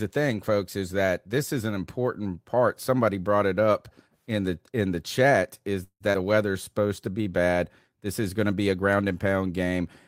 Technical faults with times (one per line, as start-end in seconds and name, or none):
5.83-6.03 call audio freeze
6.12-6.17 skip ahead
6.52-7.23 jitter buffer slow-down